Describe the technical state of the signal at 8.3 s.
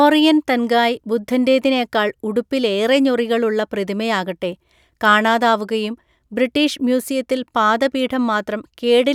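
At 8.3 s the speech signal is intact, with no dropout, distortion, noise burst or other technical fault present.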